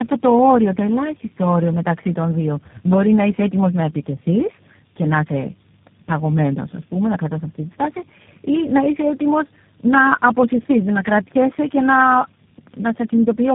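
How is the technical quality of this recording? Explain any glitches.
The quality is poor throughout. Tandem speech coding affects the whole 13.5 seconds of speech: it sounds rough, muffled and warbly, with nothing above about 3.8 kHz. That damage points to four speech codecs in a row, ending with G.729A. Each coder re-encoded the previous one's decoded output, so artefacts compounded. Unlike a single low-bitrate codec, the speech is rougher and noisier than any one coding stage alone.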